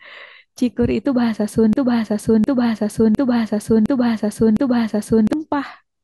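Speech runs cleanly for the first 1.73 s, then gets stuck in a broken-record loop from 1.73 to 5.33 s. A chunk of about 0.71 s plays back to back, identical each time, five times over, so whatever should have been said in those three and a half seconds is simply gone. That pattern points to a stall somewhere in the chain, most likely a player, encoder or stream that kept resending the last fragment it had buffered.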